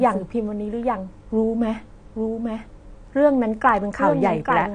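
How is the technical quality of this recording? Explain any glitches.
The technical quality is poor: two faults run through the whole speech clip.

Doubled audio track, throughout: every phrase returns about a second later as a full-band copy roughly 5 dB quieter, with no decay or room colour. The likely cause is a second, slower capture path or an edit layering two out-of-step copies.

AAC compression, throughout: the sound is dull and smeared, with nothing above 9.8 kHz and a plainly audible warbling, fizzy texture on sibilants and sustained sounds. The likely cause is low-bitrate AAC-LC coding, consistent with around 32 kbps, which lowers the cut-off and coarsely quantises the spectrum.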